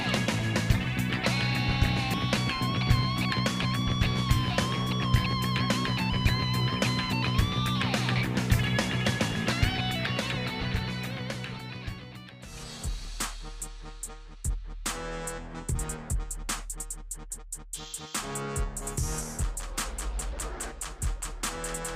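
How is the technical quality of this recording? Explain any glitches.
There are three small skips in the audio, at 2.14, 13.05 and 19.55 s. Each is a sudden jump forward with no gap of silence, dropping roughly 50 ms at the first two and about 20 ms at the last. A dropped buffer (overrun) is the likely cause: fresh samples overwrote a block before the software read it, so the surrounding audio butts straight together.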